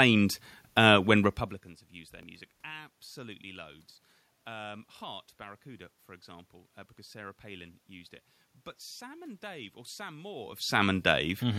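At 2.23 s the speech skips ahead about 10 ms, likely a dropped buffer (overrun): unread samples got overwritten, ends spliced together.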